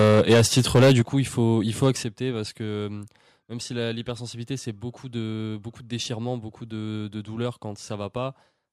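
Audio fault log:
0.00–1.01 s, microphone overload: the loudest peaks drive about 7 dB past the converter's ceiling, and roughly a sixth of the samples have their tops sheared flat. The likely cause is an input gain set too high, and it gives a harsh, crackly edge up to "coup il faut il".
1.02 s and 2.04 s, microphone volume stepped down: the level drops abruptly by about 8 dB just before "coup il faut il", then by about 6 dB between "il faut il faut" and "parce que euh même". Each step is likely the call software reacting to a microphone it found too loud by cutting the device's input gain in one jump, so voice and background fall together.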